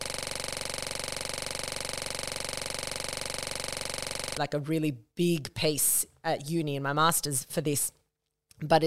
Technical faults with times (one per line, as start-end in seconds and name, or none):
0.00-4.37 system hang loop